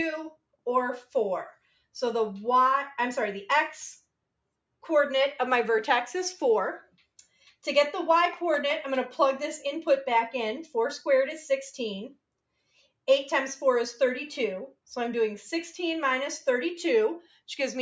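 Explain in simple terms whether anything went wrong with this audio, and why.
Nothing went wrong with this audio: it passed through the normal microphone processing of a call, which trims away the very deepest bass and leaves nothing above 8 kHz, and that is how a call is meant to sound.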